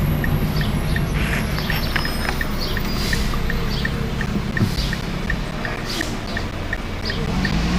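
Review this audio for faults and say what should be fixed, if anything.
From 4.26 to 7.52 s you get periodic USB or driver dropouts: every 0.25 s about 10 ms goes silent, heard as a steady tick. To prevent it, find whatever background task is stalling the bus or driver, or put the interface on its own USB controller.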